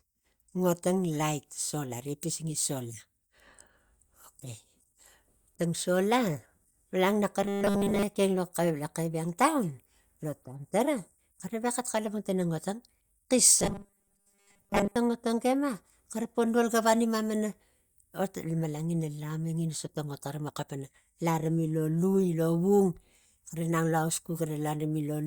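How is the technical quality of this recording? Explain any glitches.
The recording has two short stretches of robotic sound from repeated short buffers, at 7.42 to 8.03 s and 13.59 to 14.96 s. In both, the speech becomes a rigid, metallic buzz at 200 Hz. The likely cause is audio arriving too seldom, so a 5 ms slice is looped and most of the real signal is skipped.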